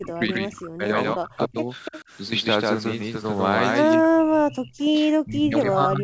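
Throughout the speech, a doubled audio track is audible: a second full-band copy trails the original by roughly 150 ms at close to the same level. It has no reverberant tail or room colouring, only a hard repeat of every syllable. The likely cause is the same signal being mixed in twice, either from a slower capture path or from an edit that left two misaligned copies.

From 0.0 to 0.97 s and again from 1.14 to 1.71 s, the speech is suppressed in double talk. The level collapses by around 35 dB at its deepest. This is likely an echo canceller that, with both sides talking at once, could not tell its own talker from loudspeaker echo and attenuated everything.

At 1.85 to 2.01 s, an echo leak appears: a copy of the speech returns 289 ms late, roughly 15 dB below the direct sound. It is likely residual loudspeaker pickup that the echo canceller failed to remove and sent back.

The suppression returns from 3.95 to 4.81 s, again dropping by around 35 dB. 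A second, fainter echo leak follows at 4.8 to 4.91 s, with the same 289 ms delay and roughly 20 dB down.

A final stretch of double-talk suppression runs from 5.09 s to the end, with dips of about 30 dB. Across the whole clip, the band stops at 8 kHz, consistent with a G.722 call path.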